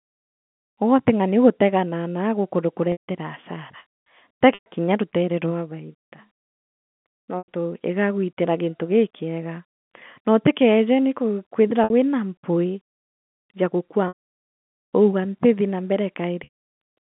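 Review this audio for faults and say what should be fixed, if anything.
Packet loss with pitch repetition occurs six times: 2.92–3.01, 4.54–4.66, 7.39–7.48, 11.84–11.90, 14.08–14.61 and 16.44–16.54 s. Each gap is bridged by repeating the last pitch cycle. The short ones sound held and buzzy. The 720 ms loss after "ya gukua" fades into silence.

Forward error correction and a deeper jitter buffer on the link would prevent these dropouts.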